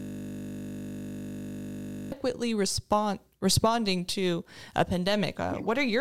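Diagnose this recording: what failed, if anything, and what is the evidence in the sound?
System hang loop at the driver buffer: already under way at the start and lasting until 2.12 s, one frozen 20 ms buffer replays as a steady 50 Hz buzz.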